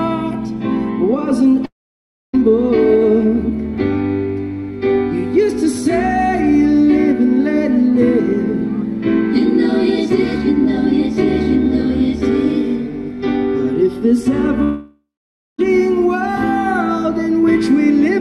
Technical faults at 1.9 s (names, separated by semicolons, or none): long network dropout